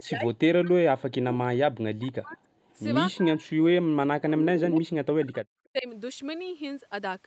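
Speech recorded through a call path whose Opus coding limits content to 8 kHz, with two kinds of fault. Speech suppressed in double talk cuts the voice by roughly 40 dB at 0.0–0.71 s, 1.12–2.44 s, 3.16–4.14 s and 4.66–5.4 s, and by about 10 dB at 5.72–5.87 s. The likely cause is an echo canceller that could not separate this talker from loudspeaker echo while both sides spoke, so it attenuated everything. Echo leak appears as a faint delayed copy of the voice, 315 ms behind, at 2.09–2.37 s and 3.12–3.16 s, well below the speech, and as a much stronger burst at 4.75–4.79 s, only a few dB down. This is likely residual loudspeaker pickup that the far-end canceller failed to remove and sent back.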